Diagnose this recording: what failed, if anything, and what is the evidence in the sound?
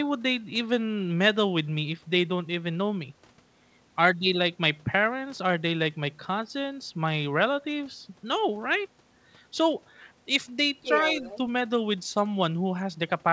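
Other side's voice leaking through, at the call-processing stage: from 10.82 to 11.37 s a second, fainter voice sits under the talker's speech, roughly 10 dB down. The likely cause is residual echo: the far end's audio played from the talker's loudspeaker reached the microphone and the echo canceller left part of it behind. The call path's band limit, with nothing above 8 kHz, fits a wideband codec such as G.722.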